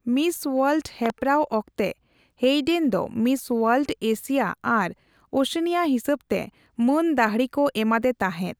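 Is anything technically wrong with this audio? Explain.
Yes. From 1.06 to 1.12 s there is a loud pop: two sharp clicks in quick succession, peaking roughly 10 dB above the speech, which continues underneath. The likely cause is a brief voltage spike, such as a plug, switch or static discharge, entering the signal chain.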